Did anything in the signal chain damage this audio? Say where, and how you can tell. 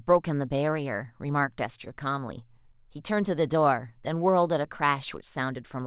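No, nothing stood out on listening; the speech comes through the call path at its usual narrow telephone bandwidth, with nothing above 4 kHz, as expected for a 64 kbps G.711 A-law link.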